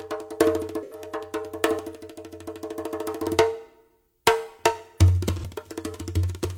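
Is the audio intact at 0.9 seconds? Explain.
No. From 0.83 to 1.01 s the music has AAC frame loss with concealment: about 85 ms went missing, consistent with two lost frames, and the decoder rebuilt it from the last good spectrum. It sounds smeared and phasey. A spectrogram shows blurred, noise-like texture in place of sharp harmonics.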